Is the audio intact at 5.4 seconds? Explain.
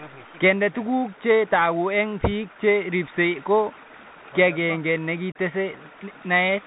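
No. Unconcealed Bluetooth headset packet loss leaves a hole from 5.32 to 5.36 s, just before the moment asked about. About 34 ms of audio never arrived between headset and phone, which points to a run of roughly ten short packets. Nothing was patched in; silence or an idle pattern stood in for them. The sound drops out with hard edges that can click, and as the link resumes around 5.4 s the level comes back briefly quieter while the codec's step size rebuilds.

That recovery is shaped by the Bluetooth CVSD headset codec, which runs through the whole clip at 64 kbps. CVSD sends one up-or-down bit per sample and adapts its step size, and it passes nothing above 4 kHz. Here that gives muffled, narrowband speech, scratchy s sounds, distortion where loud high content outruns the step, and a granular hiss underneath, all plainly audible.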